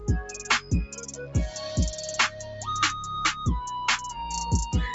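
Right from the start you can hear a noise suppressor built for speech running on music or sounds it wasn't designed for. It treats anything steady or sustained as background noise and pulls it down, so the level swings by about 10 dB as the processing decides what counts as noise. The result pumps and thins, with held material sagging while sharper onsets punch through. The whole thing sits inside a band topping out at 8 kHz from the call path.

The first clear case of sound cut by the noise suppressor runs from 0.42 to 1.35 s. For most of that stretch, something sustained gets mistaken for noise and ducked by up to about 10 dB, so it sinks and its tail dies early. A shorter one follows at 2.29 to 2.67 s, dipping about 7 dB. Again the steadier part of the sound fades away while anything abrupt survives.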